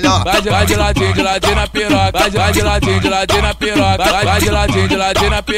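Loose connector crackle appears at 1.33 to 1.43 s and again at 4.09 to 4.21 s. A worn or dirty contact is intermittently opening and closing, chopping the signal, so each brief stretch comes through as an irregular, scratchy burst of crackle.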